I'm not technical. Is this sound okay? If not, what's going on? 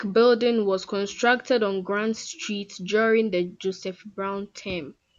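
Yes, nothing technical is going wrong in this recording. There is nothing that needs explaining here.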